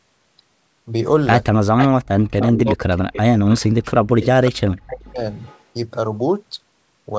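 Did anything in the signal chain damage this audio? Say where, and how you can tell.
Yes. Echo leak appears at 1.77–1.88 s, 2.39–2.62 s, 3.13–3.61 s, 4.21–4.26 s and 4.88–5.63 s, in the call-processing stage. Each scrap is a repeat of earlier speech arriving a consistent 380 ms late, first only a few dB below the direct speech, later much weaker. The fixed lag points to sound from a loudspeaker re-entering a microphone and likely slipping past an echo canceller that did not remove all of it.

Speech suppressed in double talk follows at 2.39–3.63 s and 4.43–5.25 s, also in call processing. Within each stretch the main speech repeatedly plunges, at worst by about 40 dB, with roughly 0.7 s of each stretch affected. Both stretches overlap leaked echo. The likely cause is the canceller's suppressor, unable to separate the local talker from the returning echo during simultaneous activity, attenuating everything at once.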